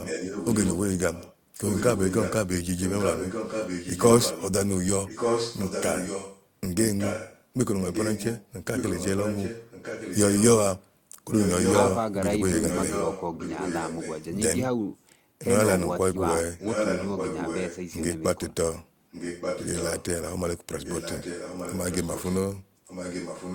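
Echo leak runs through 0.00–4.52 s, 5.06–11.96 s, 12.52–14.25 s, 16.58–17.76 s, 19.11–20.05 s and 20.79–23.54 s. A second copy of the speech trails it by about 1.18 s, likely because a loudspeaker's output slipped past the echo canceller. The echo is louder in the first, second and fourth stretches.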